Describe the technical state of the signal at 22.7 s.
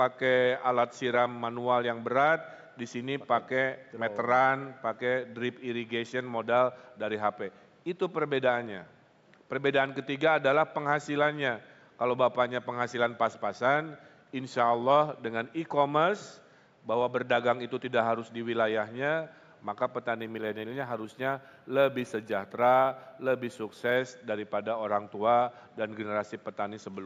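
At 22.7 s the signal shows imaging from linear upsampling, spanning 20.16 to 23.97 s. Straight-line interpolation, consistent with a 16 kHz to 48 kHz conversion, dulls the top of the band and leaves a mirrored image between 8 and 16 kHz, around 35 dB down, heard as a faint metallic shimmer.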